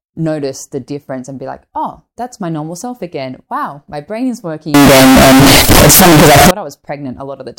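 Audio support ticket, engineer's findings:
Float read as integer, 4.74 to 6.51 s after "my brain is": sudden near-square, very loud harsh speech, noise level with voice. Likely 32-bit float samples interpreted as 32-bit integer.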